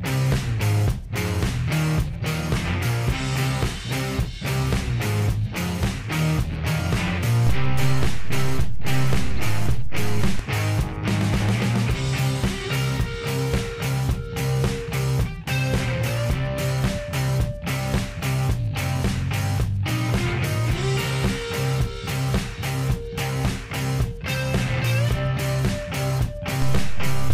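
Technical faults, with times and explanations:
7.47–10.39 s and 26.62–27.33 s: DC step. The waveform's zero line jumps by about -16 dBFS and holds, each shift producing a low thump while the sound continues unaltered.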